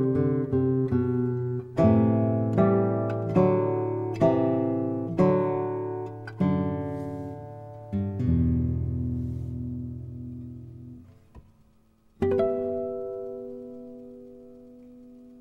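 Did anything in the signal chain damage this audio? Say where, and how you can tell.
No, nothing in the chain left an audible mark on this audio, from the analogue side through to playback.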